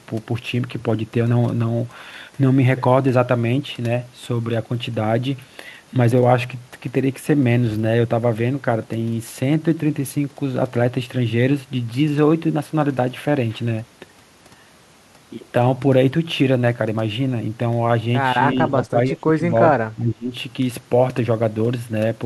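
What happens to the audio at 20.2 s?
At 20.2 s the speech falls sharply in level, dipping by roughly 20 dB between 19.94 and 20.33 s before recovering. The likely cause is speech suppressed in double talk: with both ends talking at once, the echo canceller couldn't separate this talker from returning loudspeaker echo and turned the signal down. Unlike a packet-loss dropout, the sound is pushed down rather than cut to silence, and it lasts about 0.4 s.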